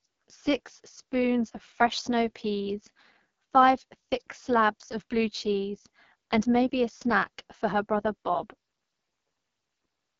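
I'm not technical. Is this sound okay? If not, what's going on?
No. The whole clip has gone through an AMR wideband (HD Voice) codec squeezed very hard, so the speech sounds rough and raspy, with nothing above about 6.9 kHz.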